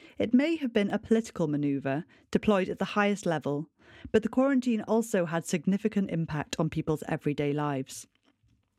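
From 0.90 s to 6.89 s the speech carries periodic USB or driver dropouts: every 2.0 s a brief gap of around a millisecond drops to silence, as something stalls the audio path. The result is evenly spaced ticks, heard only over sound. That strict regularity distinguishes them from random clicks.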